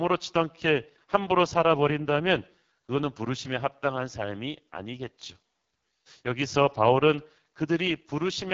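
Throughout the speech the sound is rough and raspy, with a buzzy, grainy texture and nothing above about 7.3 kHz. This is heavy AMR wideband (HD Voice) codec damage, which fits its lowest 6.6 kbit/s mode, where the pulse-driven vocal tract model has too few bits.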